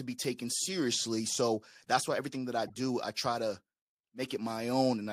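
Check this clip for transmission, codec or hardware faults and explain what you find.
One fault turns up in this speech: a corrupt frame decoded from 2.67 to 2.76 s. The decoder accepted damaged bits and misread gains or codes across roughly three frames, spraying energy at wrong frequencies. It comes through as a brief chirpy burst, faint at about -35 dBFS, and shows on a spectrogram as a short smear of misplaced energy.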